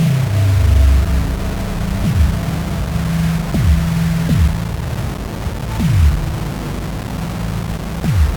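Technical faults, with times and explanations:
Throughout, low bit depth without dither: coarse quantization error rides on the sound itself, only about 15 dB below it, and changes as the sound does; a likely 4-bit rounding, unlike steady hiss, which would stay constant and fill quiet gaps.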